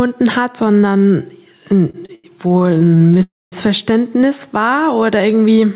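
Throughout the clip the level swings by around 5 dB, which is gain pumping, likely from a fast limiter working against excessive input gain. Unlike a level drift, it tracks each loud sound. From 1.9 to 3.21 s the audio stalls in 18 short gaps, the longest 89 ms. Each is filled by continuing the last sound, adding about 366 ms, so nothing is lost but the speech stutters: the repeated stalls of an underrun jitter buffer, rather than dropouts. From 3.23 to 3.54 s a single 292 ms hold follows, the last sound continuing and fading into about 220 ms of silence before speech resumes where it stopped. This is a call audio freeze, likely from packets held in transit, and it is one long wait rather than many brief ones. From 4.70 to 5.38 s the speech runs at about 92% speed with unchanged pitch, gaining 56 ms as pitch periods repeat. This jitter buffer slow-down drags smoothly rather than stopping. 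Over the narrowband G.711 call path nothing sounds above 4 kHz.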